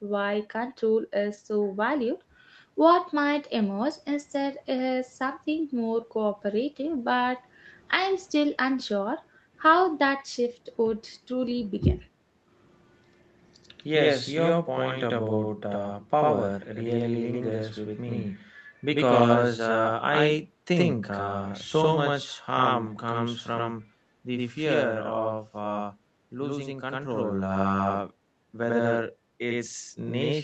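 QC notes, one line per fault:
Throughout: channel delay (doubling). Every syllable gets a same-level second copy 92.9 ms behind it, so it sounds like a tight slap echo. One channel's running late, which fits a 4096-sample buffer, and both channels get summed to mono.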